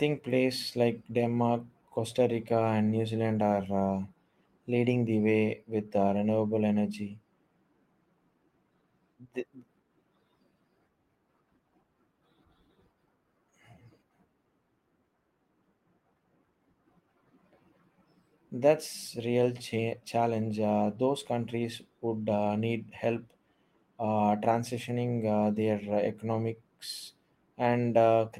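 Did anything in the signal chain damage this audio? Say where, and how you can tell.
No, nothing in this speech recording stood out on listening as damage from any stage of the signal chain.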